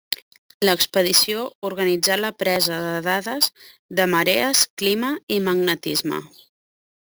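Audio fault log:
throughout, imaging from sample-and-hold upsampling: the speech was raised from 16 kHz to 44.1 kHz by holding each sample with no smoothing filter, so mirrored copies of the spectrum sit above 8 kHz, the first occupying 8 to 16 kHz at about 11 dB below the signal. This gives a bright metallic fizz that rises and falls with the speech. Unlike hiss, the lowest image moves opposite to the pitch.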